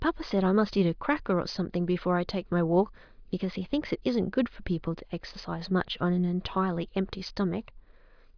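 No technical faults can be heard anywhere in the speech recording.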